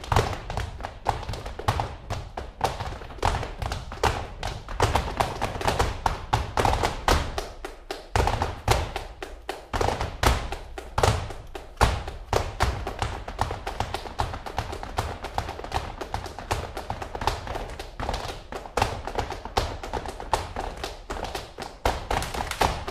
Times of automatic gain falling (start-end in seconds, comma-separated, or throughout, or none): none